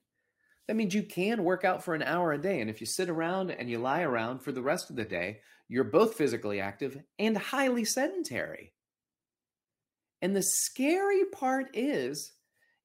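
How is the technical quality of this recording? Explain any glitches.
The speech has one clear glitch, a stretch of reduced quality partway through.

An adaptive stream at a lower bitrate runs from 3.22 to 5.22 s. For those two seconds the playback dropped to a lower-quality version of the stream, most likely because the connection slowed, and the sound fits a switch from a 96 kbit/s AAC stream to an HE-AAC stream of around 20 kbit/s. The change is abrupt, with no gap. Nothing remains above 14.9 kHz, and codec artefacts rise, until full quality snaps back at 5.22 s.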